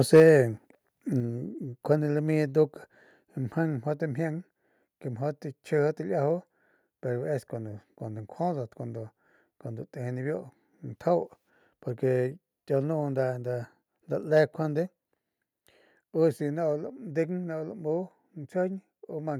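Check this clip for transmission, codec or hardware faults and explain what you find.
Two faults are audible, both at the very start: a burst of clipping and two sudden drops in input level.

Microphone overload, from 0.13 to 0.29 s: the loudest peaks are flattened, about 4 dB beyond what the converter can hold, with around one sample in twenty cut off. The cause is likely an input gain set too high, so waveform tops hit the converter's limit and are sheared off. That gives a harsh, crackly edge on the syllable peaks. Codec distortion would sound smeared or watery instead, and it would not be tied to the loudest moments.

Microphone volume stepped down, at 0.2 s and again at 1.2 s: the level falls abruptly, by about 3 dB and then by about 5 dB. The first drop lands in the middle of the clipped stretch, which suggests call software reacting to the overload and lowering the device input in steps. 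What separates this from a network fade or from noise suppression is that the voice and the background drop together, instantly, and stay lower afterward rather than recovering.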